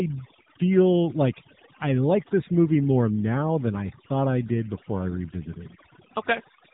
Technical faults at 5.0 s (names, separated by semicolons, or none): overdone noise removal; AMR narrowband mobile codec